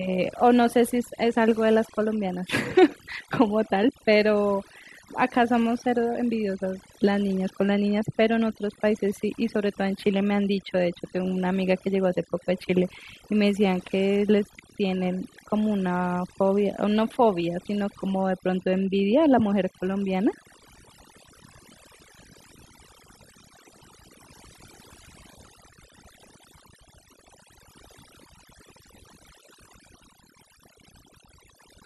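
From start to finish there's overdone noise removal: bands near the noise floor get gated off, so gaps go near-silent with twinkly specks and quiet parts of the speech get cut along with it.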